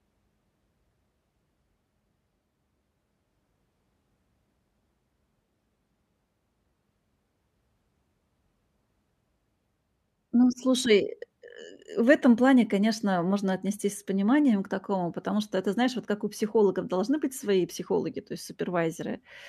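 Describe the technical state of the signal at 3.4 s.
At 3.4 s the speech signal is intact, with no technical fault present at that moment.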